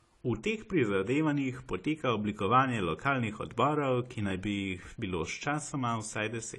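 Throughout the speech, the sound is dull and smeared, with nothing above 11.5 kHz and a fizzy, warbling texture on sibilants. The likely cause is AAC compression: a lowered cut-off and coarse spectral quantisation that fit AAC-LC at a bitrate near 32 kbps.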